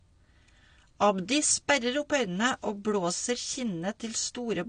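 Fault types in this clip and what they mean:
AAC compression: the speech sounds dull and smeared throughout, with a fizzy, warbling edge on sibilants and sustained sounds and nothing above about 9.7 kHz. This is likely a low-bitrate AAC-LC encode, around 32 kbps, where coarse quantisation and a lowered cut-off discard high-frequency detail.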